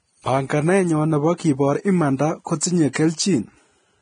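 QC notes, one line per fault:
Throughout: Vorbis compression. The speech sounds hissy and grainy, with blurred consonant attacks and no content above 9.7 kHz. This is likely heavy Vorbis coding at a rate near 23 kbps, where coarse treble quantisation swaps fine detail for noise.
1.38 and 2.93 to 2.95: pre-echo. A brief hiss of about 17 ms and 22 ms comes just before a sharp onset, which sounds softened. The codec spreads noise meant for the loud attack back across the quiet start of its transform block.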